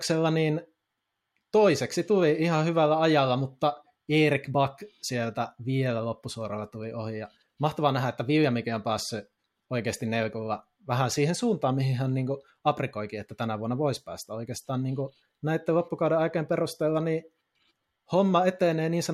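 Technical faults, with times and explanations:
No technical faults are audible in this speech.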